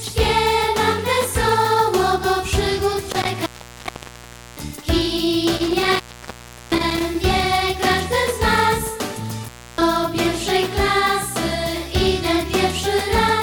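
A steady buzz at about 46.9 Hz runs under the whole clip. This is a block size mismatch (padded): one stage delivers shorter blocks than the next reads, fitting a 1024-sample read, and zeros fill each remainder. The resulting gaps repeat at the block rate, slowing playback only negligibly (0.999×).

From 3.11 to 4.87 s, 5.56 to 7.15 s, and 9.43 to 9.82 s, the sound drops out with crackle at each edge, for about 1.1 s, 0.72 s and 0.30 s respectively. This is an intermittent contact, where a loose cable or plug briefly opens the line.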